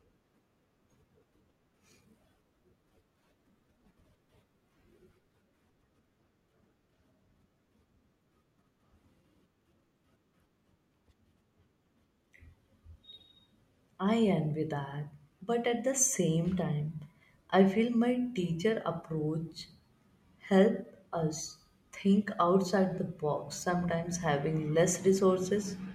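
Nothing stood out on listening to this speech recording.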